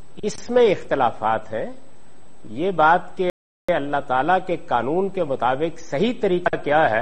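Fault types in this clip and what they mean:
Rebuffering stall: playback starved of downloaded data, so the sound drops to flat silence near 3.30 s for about 0.39 s, then resumes seamlessly; spectrogram shows a blank vertical gap.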